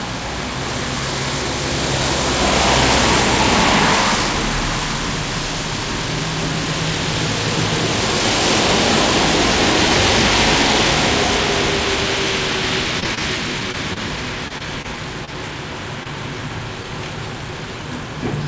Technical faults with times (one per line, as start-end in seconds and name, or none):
13.00-15.29 repeated packet loss (robotic sound)
16.03-16.07 short concealed packet loss